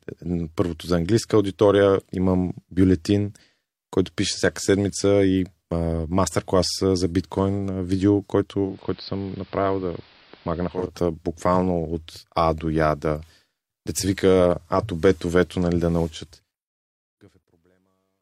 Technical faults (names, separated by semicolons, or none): digital radio blending to analogue; truncation distortion on a fade